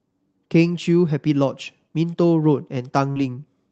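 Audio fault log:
3.11–3.19 s short concealed packet loss: roughly 40 ms of the call's audio arrived too late for the decoder, so the receiver filled the gap by extending the preceding sound for about 43 ms and then crossfaded back into real audio. It is heard as a brief smear or wobble. On a spectrogram the harmonics or noise run on flat and slightly blurred, without normal variation, under the call path's ceiling near 8 kHz. The waveform shows a short, overly regular stretch.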